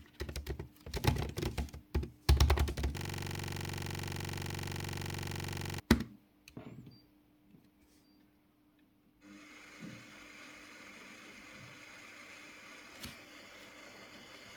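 From 2.98 to 5.8 s there's a system hang loop: a 42.67 ms slice repeats at 23.4 Hz, a rattly stutter that fits a frozen 2048-sample buffer.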